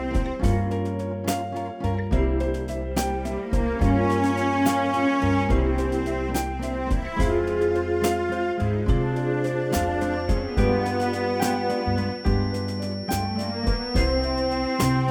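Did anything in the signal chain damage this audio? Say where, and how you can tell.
Yes: a feedback whistle from 10.06 s to the end, a single-pitch 5.5 kHz tone well below the sound, seen as a thin spectrogram line, likely from a loudspeaker-to-microphone loop at the edge of feedback.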